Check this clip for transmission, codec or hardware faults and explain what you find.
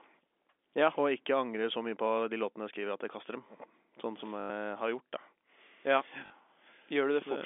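Two short dropouts interrupt the speech, both packet loss with the last packet repeated, riding on a normal G.711 telephone line band. At 4.4 to 4.5 s (100 ms) and 6.26 to 6.3 s (40 ms), the receiver replayed its last packet until fresh ones arrived. The stutter points to 20 ms packets: the longer run buzzes near 50 Hz.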